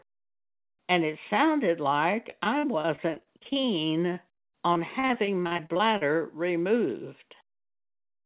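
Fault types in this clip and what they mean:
Repeated packet loss (robotic sound): from 2.30 to 3.65 s and again from 4.13 to 6.03 s, packets kept failing to arrive, leaving holes up to 40 ms long. Each was patched by stretching the previous sound, so nearly a quarter of each stretch is filler, giving choppy speech with pieces missing.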